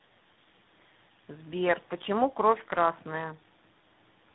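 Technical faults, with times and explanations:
Throughout: tandem speech coding. The speech has passed through three low-rate speech codecs in a row, apparently GSM full rate, then AMR-NB at 10.2 kbit/s, and finally G.726 at 32 kbit/s, with G.711 links between them. Each coder re-encodes the previous one's errors, so the artefacts pile up into a rough, muffled, warbling sound. On a spectrogram, energy stops at about 3.9 kHz, and the harmonics look smeared and blotchy rather than cleanly striped.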